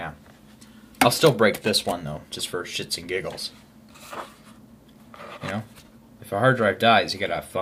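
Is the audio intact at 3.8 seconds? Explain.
Yes, the audio is intact at 3.8 seconds, with no fault audible at that moment.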